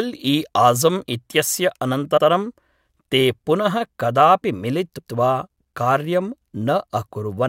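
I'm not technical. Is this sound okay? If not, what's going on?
No. The speech stutters at 2.16 s and 4.97 s, where a moment repeats. These are repeated frames: short stored chunks of audio (0.09 s, then 0.14 s) played twice.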